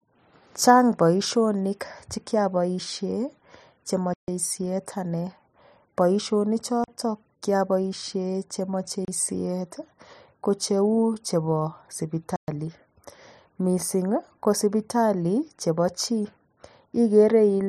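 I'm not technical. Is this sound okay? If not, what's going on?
No. Four times the playback system briefly handed over nothing at all, a block of digital silence, so the speech cuts out abruptly and returns: at 4.14 s (about 144 ms), 6.84 s (40 ms), 9.05 s (30 ms) and 12.36 s (120 ms).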